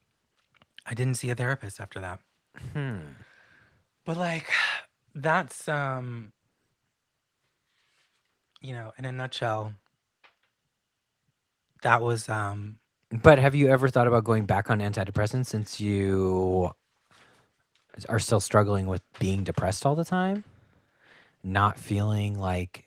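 No technical faults can be heard in this speech.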